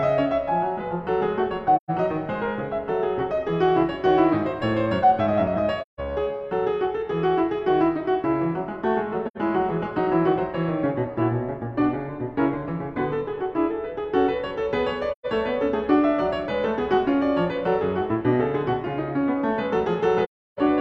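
The music drops out at 1.76, 5.82, 9.27, 15.12 and 20.24 s, lasting about 128, 171, 85, 128 and 341 ms. This is AAC frame loss with muting: lost frames were decoded as silence, and the overlapping windows fade the sound out and back in. A spectrogram shows full-band blank gaps, and the waveform shows soft-tapered holes.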